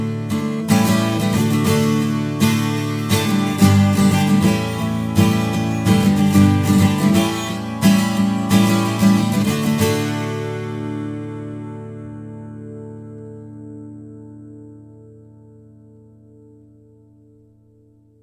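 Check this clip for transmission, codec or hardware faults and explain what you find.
One fault runs through the whole clip: aliasing. The sample rate was reduced without an anti-alias filter, which fits a 48 kHz to 32 kHz conversion, so content above 16 kHz folds back down as gritty, metallic tones about 25 dB below the sound.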